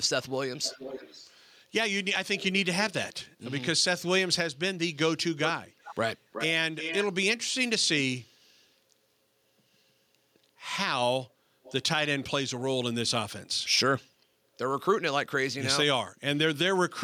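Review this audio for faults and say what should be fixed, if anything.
Echo leak shows up at 0.3–1.36 s, 2.36–3.26 s, 5.44–5.95 s, 6.32–6.46 s, 6.79–7.07 s and 11.63–11.83 s. A delayed copy of the speech trails it by about 0.47 s early on, about 0.37 s in the middle stretch and about 0.43 s near the end. It's faint at first, much louder around 5–7 s, and barely there at 11.6 s. Likely the far end is on a loudspeaker and its echo canceller isn't fully removing what its mic picks up, so that gets sent back. To prevent it, have that side use a headset or fix its echo cancellation.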